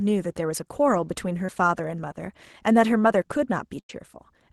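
A speech recording passed through a call codec whose band stops near 12 kHz, which fits Opus at a modest bitrate. At 1.45 to 1.49 s there is a short concealed packet loss: about 30 ms never arrived, and the receiver bridged it by extending the preceding sound from its pitch or as shaped noise, then crossfaded back. It comes across as a quick smear or wobble, with nothing held long enough to buzz. That brevity separates it from the later event. At 3.80 to 3.90 s a burst of packet loss removes about 90 ms. Here the concealment runs long enough to be heard as a sustained buzz or hiss that fades as it is turned down, and the speech then resumes further along with that stretch gone. The longer, decaying fill and the audible jump set the burst apart from the brief smear at 1.45 s.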